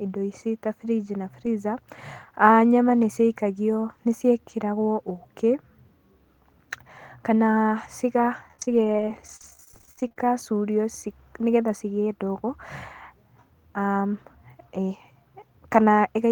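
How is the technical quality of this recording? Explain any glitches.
The recording has one clear technical problem: a burst of repeated packet loss (robotic sound) from 8.48 to 10.32 s. In that stretch, roughly thirty brief holes open in the stream, the longest about 39 ms. Each is patched by extending the preceding sound, with about 417 ms filled in this way, close to a quarter of the span. Because the patches follow one another so closely, the speech comes out choppy, with fragments audibly missing.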